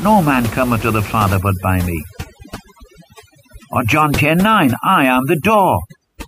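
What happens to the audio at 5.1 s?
Overdone noise removal runs from 1.26 s to the end of the clip at 6.28 s, so it is active at 5.1 s. The denoiser is set too aggressively: any frequency band it judges close to the room noise, which sits about 15 dB below the speech, is pushed far down or switched off, and the quieter parts of the speech are cut with it. The background drops and breaks up into twinkling specks.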